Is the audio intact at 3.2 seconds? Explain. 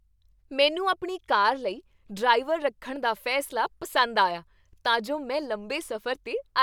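Yes, the speech at 3.2 seconds plays through cleanly, with no dropout, click, distortion or other fault at that moment.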